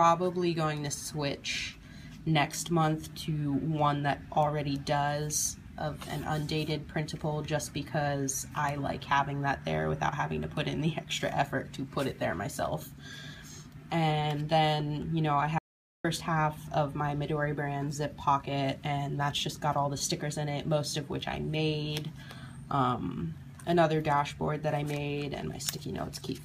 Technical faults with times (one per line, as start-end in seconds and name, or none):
15.58-16.04 audio dropout to silence